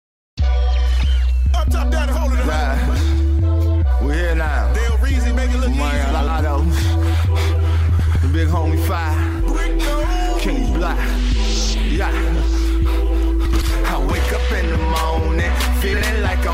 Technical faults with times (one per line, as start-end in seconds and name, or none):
6.11-6.29 frames out of order
7.99-8.16 frames out of order
13.45-13.64 frames out of order
15.93-16.02 frames out of order